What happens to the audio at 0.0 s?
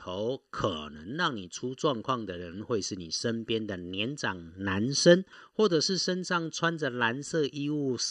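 From the very start, and throughout, the speech carries channel delay (comb filtering): one channel lags by less than a millisecond, so summing to mono cancels evenly spaced frequencies from around 700 Hz upward. It sounds hollow and phasey, but the notches stay fixed rather than sweeping like flanging.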